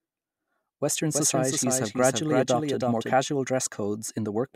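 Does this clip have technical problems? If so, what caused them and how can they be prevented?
Yes. From 1.15 s to 3.13 s the speech has a doubled audio track: a second full-band copy trails the original by around 300 ms, roughly 5 dB quieter, with no reverberant tail or room colouring, and it cuts in and out abruptly at both ends. The likely cause is the same signal reaching the mix twice, once directly and once through a slower capture or monitoring path. To prevent it, route each source through a single path and mute any duplicate return before recording.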